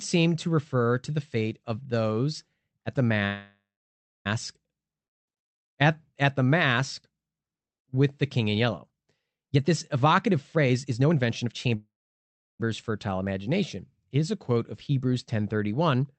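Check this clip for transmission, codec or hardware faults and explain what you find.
Two kinds of call fault are audible: two freezes and two bursts of jitter buffer speed-up. The audio passes through an Opus call codec, with the band limited at 8 kHz.

Call audio freeze, 3.25–4.27 s and 11.76–12.61 s: After "of those at the", the last sound is stretched into a fading buzz or hiss, then about 0.62 s of silence, roughly 1.0 s in total. The second freeze lasts 0.84 s, with about 0.7 s silent, just before "fertile imagination". The likely cause is delayed packets emptying the jitter buffer. Unlike a dropout, nothing is lost. The sound resumes exactly where it stopped.

Jitter buffer speed-up, 9.49–11.75 s and 15.73–16.13 s: The first stretch runs at 123% speed, ending just before "fertile imagination", with roughly half a second trimmed out. The second runs at 108%. The buffer had built up excess delay and shed it by cutting tiny pitch-period slices. 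The audio sounds hurried, but unlike a resampling error the pitch stays unchanged.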